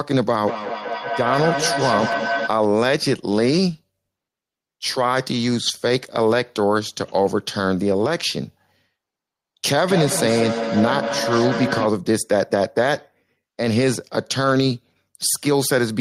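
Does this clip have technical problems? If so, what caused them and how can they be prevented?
Yes. Feedback echo between two devices appears from 0.43 to 2.56 s and again from 9.88 to 11.95 s. Two devices in the same room are on the call, and each one's loudspeaker output reaches the other's microphone, which its own echo canceller has no reference for. The speech returns at roughly a fifth of a second, thinning and ringing, peaking at about 4 dB and 6 dB below the direct voice. Prevent it by muting one device's microphone and speaker, or using headphones.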